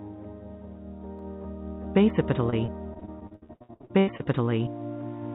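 At 1.19 s and 2.10 s, single sharp clicks appear as thin vertical lines on the spectrogram and abrupt steps in the waveform, likely dropped samples losing only a fraction of a millisecond. From 2.5 to 4.27 s, repeated packet loss gives choppy, robotic sound. Many short gaps, the longest 77 ms, are patched by stretching the previous sound, covering about a third of the span. On the spectrogram these patches show as smeared, repeated bands and broken stretches, all below the 4 kHz ceiling left by the G.711 call path. The same kind of click recurs at 3.34 and 4.38 s.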